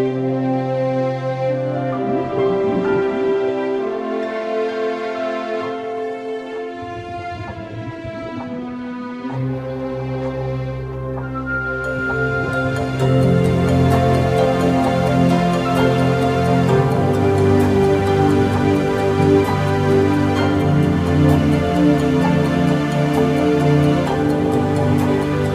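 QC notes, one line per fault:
No faults were found in the audio. Nothing needs a time stamp or further review.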